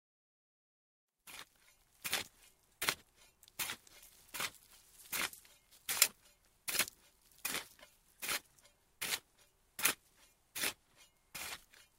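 No technical faults can be heard anywhere in these everyday sounds.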